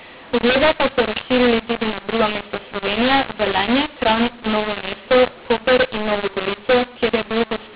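From start to finish the speech carries a mu-law and A-law mix-up: samples written with the A-law curve are being expanded with the mu-law curve, so every level is mapped wrongly. Some peaks swell and others shrink, and near-silent samples jump well above zero, making the voice harsh and gritty and filling pauses with hiss. On a waveform the gaps show a thick noise floor instead of flat lines; a spectrogram shows broadband distortion smeared up to the 4 kHz telephone ceiling.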